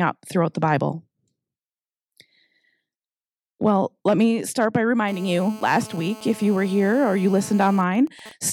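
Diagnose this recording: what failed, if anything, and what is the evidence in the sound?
A hard, raspy buzz enters at 5.08 s, just after "let me start by", and holds steady until 7.80 s. It sits at about 217 Hz with a dense stack of harmonics, roughly 21 dB below the speech, and bears no relation to it. This is GSM phone buzz, introduced in the analogue wiring. A nearby 2G handset in a call transmits its radio bursts 217 times a second, and an audio input rectifies them into this pulse train.

From 7.80 s to 8.44 s the steady tone gives way to even ticks with a longer 217 Hz buzz twice a second, around 20 dB below the speech. These are GSM signalling bursts, also picked up in the analogue wiring. The same handset, still in the call but with its own talker silent, now sends only short groups of bursts. The circuit rectifies each group, producing an intermittent rhythm instead of a continuous drone.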